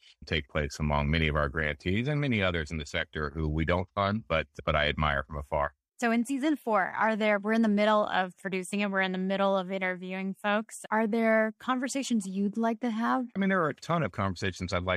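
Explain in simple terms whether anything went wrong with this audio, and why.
Nothing went wrong with this speech recording, and there are no technical faults to point to at any moment. There is simply nothing here that needs explaining or fixing.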